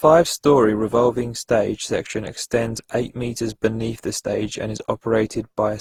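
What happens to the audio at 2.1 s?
At 2.1 s the speech carries the generation loss present throughout the clip. It sounds swirly, hollow and smeared, with blurred onsets. The likely cause is around ten Opus passes near 48 kbit/s, each requantising on a shifted frame grid. A spectrogram shows smeared syllable edges.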